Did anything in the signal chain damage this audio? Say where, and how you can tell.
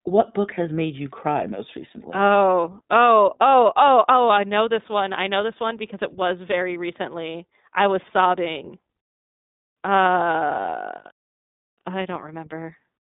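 Yes. The damage comes from the codec stage, and it lasts the whole clip. The speech is confined to a narrow telephone band, roughly 150 Hz to 3.7 kHz, and nothing is present above 3.8 kHz. The voice sounds plainly rough and slightly synthetic. That is the sound of the iLBC codec. It codes each short frame's excitation independently, which fits 20 ms frames at 15.2 kbps. The result is a fine, grainy harshness.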